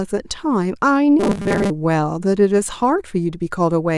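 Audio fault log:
1.20 to 1.71 s, robotic sound from repeated short buffers: the speech turns into a stiff, metallic 200 Hz buzz that only loosely follows the words, likely because audio arrived too late and a roughly 5 ms chunk kept looping over most of that stretch.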